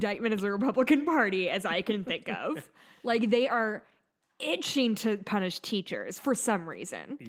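No faults are audible in this speech; the Opus voice compression leaves only a light coding texture over a full-width band, consistent with its hybrid mode at around 24 kbps.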